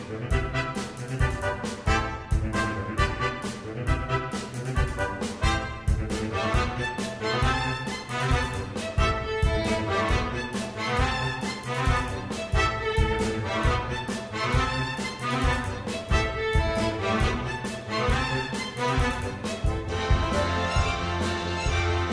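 Nothing in the audio stood out as a technical fault on listening.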